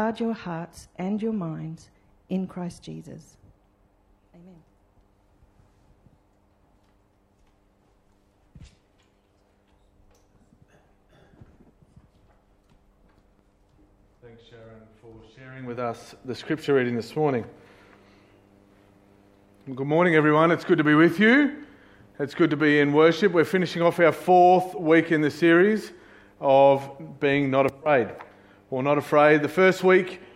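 From 0.0 to 2.0 s the clip suffers an adaptive stream starting at a low bitrate. The player opened on a cheap version of the stream to start fast. The treble sounds thin and synthetic, and codec artefacts are strong, which fits a low-rate HE-AAC stream near 20 kbit/s. At 2.0 s the quality jumps up with no gap, which suggests a switch to AAC-LC near 96 kbit/s. Nothing is heard above 14.9 kHz.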